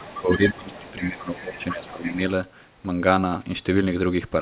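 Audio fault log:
0.0–2.16 s other side's voice leaking through: a second voice sits roughly 10 dB under the speech, likely echo the canceller failed to remove from the loudspeaker.
0.2–2.2 s speech suppressed in double talk: the talker's speech dips by up to about 15 dB over roughly 1.5 s, likely the canceller ducking both voices during overlap.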